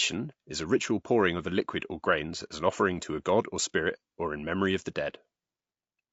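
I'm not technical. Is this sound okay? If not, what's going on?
No. Throughout the speech, voices sound rough and grainy, with a hiss between tones, likely from low-delay AAC compression, the kind used in video calls.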